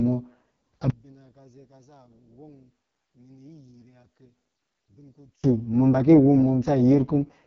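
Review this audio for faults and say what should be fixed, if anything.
The whole clip carries AMR wideband (HD Voice) codec damage, and it's heavy: the speech sounds rough and raspy, with nothing above 7.2 kHz, which points to the lowest AMR-WB rate, around 6.6 kbit/s. Keep calls at 12.65 kbit/s or higher.

From 0.90 to 5.44 s the level collapses by about 34 dB and the speech nearly vanishes. That's likely one channel inverted, so the shared centre content cancels when the channels sum to mono. Check polarity on each channel before any mono fold-down.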